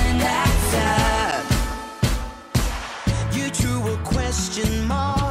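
A sharp tick at 1.31 s and another at 4.13 s mark two blocks of digital silence, about 9.4 ms and 5.3 ms long. The second fits a 256-sample buffer. Each time, the output dropped abruptly to zeros and back without a fade, likely because a buffer went unfilled in time.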